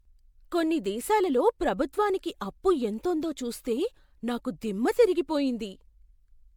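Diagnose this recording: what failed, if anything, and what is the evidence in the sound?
The codec stage shows generation loss throughout the speech. The sound is swirly and hollow, with smeared consonant attacks. Content stops at about 19.9 kHz, which fits MP3 around 96 kbit/s. That bitrate alone would not smear this much. The likely cause is repeated decoding and re-encoding, perhaps four passes. Each pass quantises again on a shifted frame grid, so noise and spectral holes accumulate.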